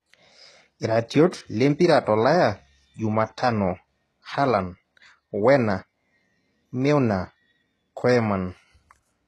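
Throughout, HE-AAC compression, likely at a rate fitting about 16 kbps, rebuilds the treble from copied lower bands, leaving sibilants gritty and lispy, with nothing above 12.3 kHz.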